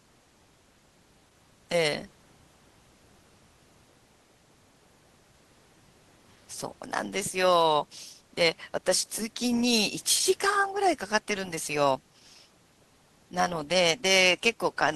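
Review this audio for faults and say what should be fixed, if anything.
No faults; nothing needs fixing.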